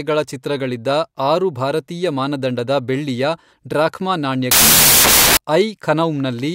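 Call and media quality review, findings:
Wrong sample width, 4.51–5.37 s. Loud noise burying the speech, half speed, an octave low. Points to 32-bit samples decoded as 16-bit, splitting each value into mismatched halves.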